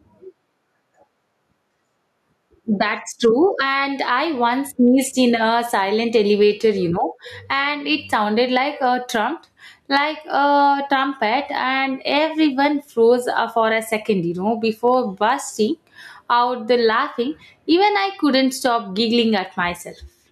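Throughout the speech, gain pumping is audible. The input gain was likely set far too high, so a fast compressor or limiter pulls the level down on each loud passage. The level swings by around 15 dB, leaving the speech squashed.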